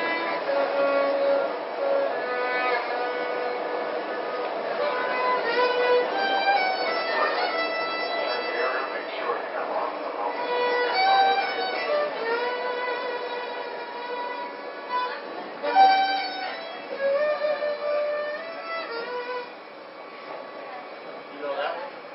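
Nothing here sounds off at any point, so there's no fault to report.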